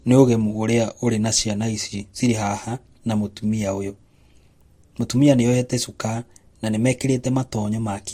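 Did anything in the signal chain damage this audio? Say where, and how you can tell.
Yes. Transcoding between lossy codecs, at the codec stage, runs through the whole speech clip. Nothing is present above 16.6 kHz, and two different kinds of coding artefact sit on top of each other. This is likely an MP3 around 62 kbit/s re-encoded as Vorbis around 47 kbit/s, with the Vorbis pass spending bits on the MP3 damage while adding its own.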